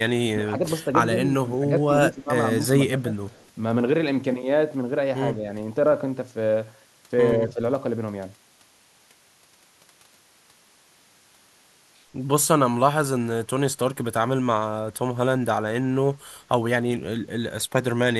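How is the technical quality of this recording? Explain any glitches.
The recording is marred by repeated brief dips in the speech and one faint echo. All of it stems from a speakerphone-style call path rather than the microphone itself.

Speech suppressed in double talk occurs at 0.36–0.61, 1.12–1.26, 1.46–1.62, 2.07–2.30, 2.88–3.13, 5.35–5.47 and 7.40–7.59 s. The speech ducks by roughly 5 to 15 dB for a fraction of a second, likely because an echo canceller mistook it for loudspeaker echo during overlapping talk. On a waveform these show as notched, pinched sections, and on a spectrogram as short columns of faded energy.

An echo leak appears at 3.32–3.50 s. A faint copy of the speech trails it by 138 ms at about 35 dB below the direct sound, likely loudspeaker pickup that the far end's canceller failed to remove. On a spectrogram it is a ghostly, displaced repeat of the preceding harmonic pattern, barely visible on the waveform.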